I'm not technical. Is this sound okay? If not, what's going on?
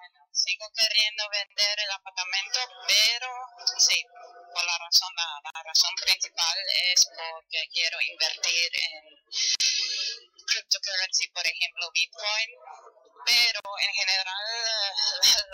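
No. The sound briefly drops to silence four times, at 1.46, 5.50, 9.55 and 13.60 seconds, and each time picks up exactly where it left off. The first dropout lasts 42 milliseconds and the others 49. This is a gap at a join of encoded pieces. The audio was compressed in separate chunks four seconds apart and then joined, and each chunk kept the short stretch of silence the encoder adds at its edges.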